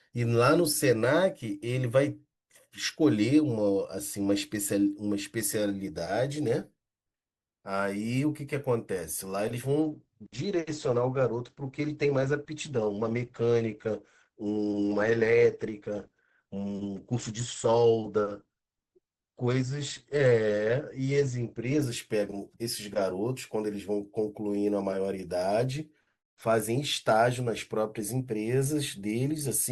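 Speech, with an adaptive stream at a lower bitrate from 9.82 s to 21.82 s. The treble abruptly vanishes above 8.4 kHz and artefacts rise, which fits a fall to around 16 kbit/s Opus. A spectrogram shows a flat-topped cut-off, and the waveform shows no gap.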